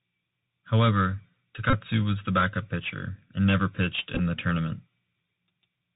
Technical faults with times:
0.00-5.96 Bluetooth CVSD headset codec
1.70-1.73 Bluetooth headset packet repeated
4.15-4.20 Bluetooth headset packet repeated

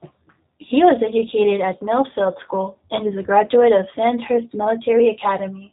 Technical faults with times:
0.00-5.73 G.729 codec

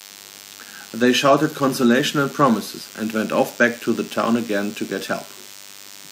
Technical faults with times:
0.00-6.11 DECT cordless phone buzz
2.80 damaged data in a compressed stream
5.07 damaged data in a compressed stream

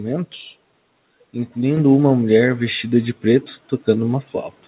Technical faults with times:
1.77 microphone volume stepped up

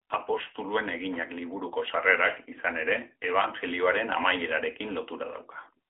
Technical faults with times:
0.00-5.90 AMR narrowband mobile codec

